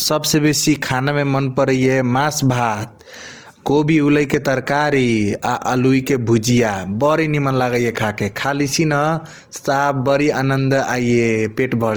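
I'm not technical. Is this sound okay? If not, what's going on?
No. All the way through, the speech has a grainy, rough texture, as if a fine layer of hiss or sand were woven into it, and that roughness is plainly audible. The likely cause is Opus compression, a way of shrinking audio files. Here it was squeezed hard, so instead of storing every detail the encoder fills in gaps with noise-like filler. It keeps the full range from deep to bright, which is why it sounds grainy rather than muffled.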